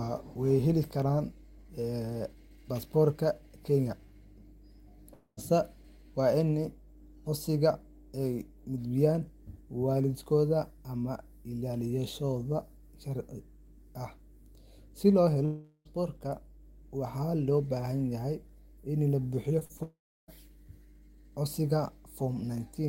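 A ground loop or nearby transformer is leaking the 50 Hz power line into this speech recording as mains hum, a steady low tone with some low harmonics running through the whole clip, sitting roughly 20 dB below the speech. Three long network dropouts, where audio likely stopped arriving for a long stretch, occur at 5.13–5.39 s, 15.45–15.87 s and 19.83–20.30 s. The receiver stretches the last sound into a fading buzz or hiss. At 19.83 s, right after "la buuxiyo", this gives way to about a third of a second of silence before the speech resumes with the gap simply gone. Just before that, short concealed packet loss drops a few hundredths of a second at 19.59–19.63 s, 19.65–19.71 s and 19.77–19.81 s, also after "la buuxiyo". The decoder patches each hole by continuing the preceding sound, which is heard as brief smears or wobbles.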